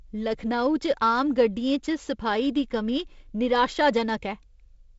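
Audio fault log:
Nothing to log here: the speech comes through G.722 wideband telephone coding working as it should, with just the faint upper-band hiss that coding brings.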